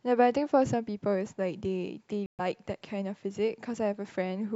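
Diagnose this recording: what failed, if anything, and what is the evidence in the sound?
At 2.26 s the speech cuts to silence and returns at 2.40 s, resuming further along as though it had kept running underneath. This is a Bluetooth dropout at the wireless playback stage, most likely packets arriving too late at the headphones and being discarded, with roughly 128 ms of audio lost, which fits a handful of dropped frames. On a waveform it appears as a flat line across that span; a spectrogram shows a blank vertical band spanning all frequencies.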